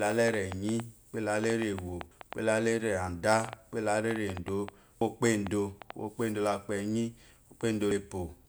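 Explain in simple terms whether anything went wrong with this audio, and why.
A train of clicks runs from 0.07 to 5.91 s: about 30 irregular ticks, roughly 4.6 per second, likely from electrical interference or a faulty connection.

Audio missing between chunks occurs at 2.11, 5.01 and 7.91 s. About a tenth of a second of speech is lost each time, and the likely cause is a recorder working in roughly 3-second chunks.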